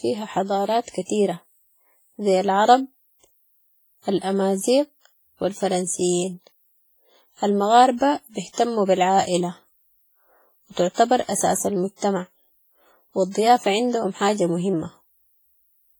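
A speech recording with heavy codec damage throughout: a ringing, washy quality and a hiss that swells and recedes with the voice, as though the noise floor were breathing. This is most likely WMA compression at a low bitrate, with damage that fits roughly 24 kbps. The long transform blocks smear quantisation noise over tens of milliseconds, and weaker spectral detail is dropped, which thins the texture even though content extends up to about 21.3 kHz. The same block behaviour produces two cases of pre-echo. A short hiss runs ahead of a sharp onset from 8.53 to 8.58 s, spreading about 49 ms, and again from 10.94 to 10.98 s, spreading about 37 ms. In each case the attack falls late in a coding block, so noise sized for the loud onset also fills the quiet moment before it, and the onset itself sounds softened and smeared.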